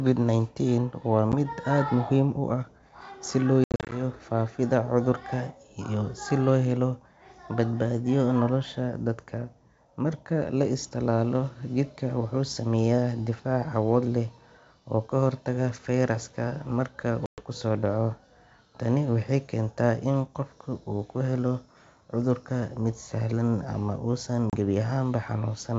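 Speech carried over a wideband G.722 link has four bursts of packet loss on an ADPCM call, at 1.32–1.34 s (a 10 ms gap, about one packet), 3.64–4.01 s (scattered holes totalling 190 ms, longest 70 ms), 17.26–17.41 s (120 ms) and 24.50–24.56 s (30 ms). The waveform drops to silence with hard edges, and the spectrogram shows blank vertical strips. The decoder's predictor and step size lose track, so after each hole the speech returns slightly distorted and settles within tens of milliseconds.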